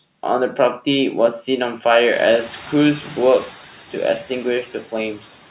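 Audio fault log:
throughout, noise suppressor artifacts: the background noise dips between phrases and swells back under the speech, most obvious after the room noise rises around 2 s. The suppressor cuts steady-noise bands by about 10 dB, frame by frame.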